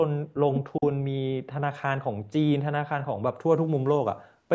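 Speech suppressed in double talk, from 0.77 to 0.82 s: for about 50 ms the speech dips by around 10 dB, a brief drop in level. The likely cause is an echo canceller facing sound from both ends at once. Unable to tell the near talker apart from loudspeaker echo, it pulled the level down on everything. In this clip the call microphone processing stops the audio at 8 kHz.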